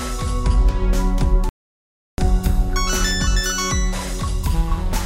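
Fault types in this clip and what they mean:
Playback stall: the sound cuts off abruptly at 1.49 s and stays silent for about 0.69 s before resuming at 2.18 s. The likely cause is the player running short of buffered data or its thread being held up, leaving nothing to output.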